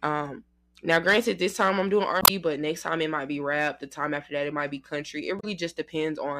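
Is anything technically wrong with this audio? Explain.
Yes, there are two instances of damaged data in a compressed stream. The first runs from 2.18 to 2.30 s, right after "this time I'm doing" and before "but next time it". The second runs from 5.36 to 5.44 s, just after "it might be country". In both, corrupted bytes make the decoder misread frames and lose sync until it finds a valid frame header. Each one is heard as a short disruption, about 0.12 s and 0.08 s long, that cuts across the speech.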